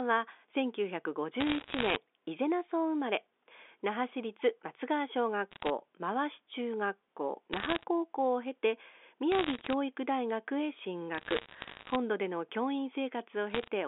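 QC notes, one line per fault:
1.40–1.96 s, 5.51–5.70 s, 7.53–7.84 s, 9.32–9.74 s, 11.15–11.96 s, 13.50–13.68 s: bit errors on a digital phone line. Each burst is crackle of sharp ticks over the unchanged speech. Roughly 0.7 to 1 bit in a hundred flips on the 64 kbit/s G.711 line. Each error corrupts a single sample, and hits on sign or high-order bits produce sharp ticks.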